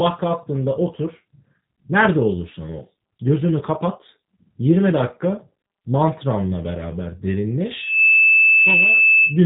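The whole recording has passed through a G.729 codec, a low-rate VoIP coder that discards the real waveform and rebuilds each 10 ms frame from a vocal tract filter, a pitch predictor and a few pulses. The damage is plainly audible: nothing above about 3.8 kHz survives, so the speech sounds narrow and muffled, with a rough, slightly synthetic texture that fits an 8 kbit/s coder such as G.729A.

At 7.71 s, right after "dakika mantranla beraber", a loudspeaker feedback squeal begins. The microphone is picking up the loudspeaker it feeds, and at 2.6 kHz the loop gain has risen above one, so that frequency reinforces itself on every pass. A single tone swells over roughly a third of a second to about 5 dB above the speech and keeps howling until 9.42 s.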